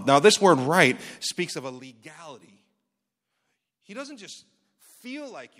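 Just after "this word right", from 1.08 to 1.84 s, zipper noise appears. The level falls by about 20 dB in 1 dB steps, roughly fifty per second, with no smoothing. Each step makes a tiny click. Together they form a fast ticking buzz over the speech.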